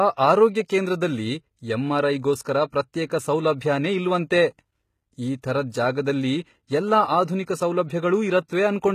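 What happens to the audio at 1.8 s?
At 1.8 s the speech is passing through what is likely HE-AAC compression, present across the whole clip, with treble synthesised by spectral band replication from copied lower bands, which fits a bitrate around 20 kbps. S sounds turn gritty and metallic, and nothing remains above 14.9 kHz.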